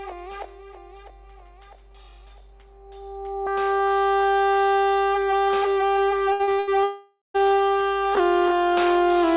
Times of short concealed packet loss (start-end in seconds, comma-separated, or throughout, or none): 6.43-6.50